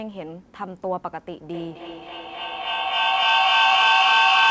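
From 1.53 s to the end there's feedback echo between two devices: a second device in the room replays what this device's mic sent back into the mic, which no echo canceller catches. Repeats arrive roughly every third of a second and pile up, reaching about 12 dB above the speech, all capped near 8 kHz by the call codec.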